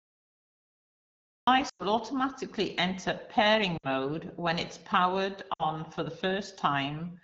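The speech opens with a cut-off start: digital silence runs until 1.47 s, where the audio begins abruptly in the middle of a sound, with no natural attack or fade. This is the signature of a recording or stream that began late.

Lost AMR speech frames follow. From 1.69 to 1.83 s, just before "automatically enter", about 100 ms is concealed, which fits five lost 20 ms frames. The decoder repeats the last good pitch and vocal tract settings at falling gain, so the sound drops to near silence within two frames. Shorter gaps of about 60 ms, fitting three frames each, occur at 3.77 to 3.86 s, just before "when it's powered", and at 5.54 to 5.64 s, just after "when it's powered". Each drops to near silence, and the voice comes back weak or rough for a moment, typical of wideband concealment. The surrounding HD Voice band sounds clear, with light codec colouring.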